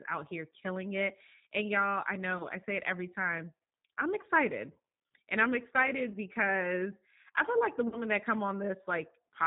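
Speech with a plainly audible rough, synthetic quality and nothing above 4 kHz, the sound of the G.729 codec at 8 kbit/s rebuilding the voice from a vocal tract filter, pitch predictor and sparse pulses. At 2.38–2.45 s, 4.21–4.27 s, 6.12–6.18 s and 7.88–8.01 s, the sound smears into a fading buzzy tone or coloured noise and then recovers weakly. This is VoIP packet loss concealed by the speech codec, with about 20 ms missing in each of the first three gaps, fitting one lost packet each, and 40 ms in the last, fitting two. Because each frame builds on the last, the decoder's guess carries on past every gap.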